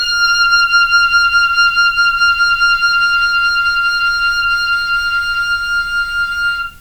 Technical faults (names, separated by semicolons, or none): low bit depth with dither